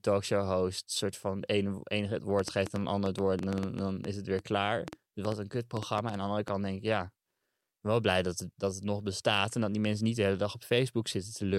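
A speech clip with a train of clicks from 2.39 to 6.49 s, after "enige het" and before "denk ik ja". About twenty similar pops, roughly 5.4 per second at uneven spacing, sit about 15 dB above the speech. They are likely interference or a faulty connection or power supply injecting pulses.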